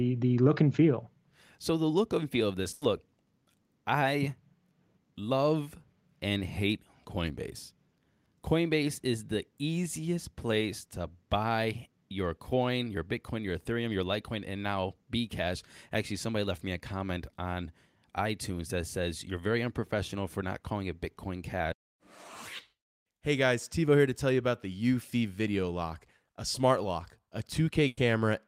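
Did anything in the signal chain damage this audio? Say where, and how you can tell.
Yes: a burst of packet loss on the network, at 2.73–2.83 s after "and feel of this" and 27.87–27.99 s after "a smart lock a". The receiver held each last sound and faded it out, showing as flat, smeared spectrogram bands, then skipped ahead. The second ends in a 10 ms silent gap.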